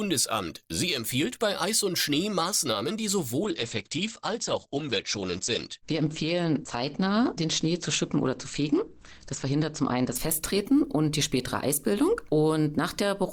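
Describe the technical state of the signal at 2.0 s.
Nothing is wrong with the signal at 2.0 s; the audio is intact at that moment.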